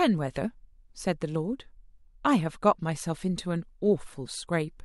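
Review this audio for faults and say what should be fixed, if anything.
No faults turn up in the audio, so nothing needs to be fixed.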